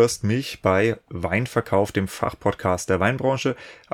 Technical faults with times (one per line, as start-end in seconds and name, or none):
none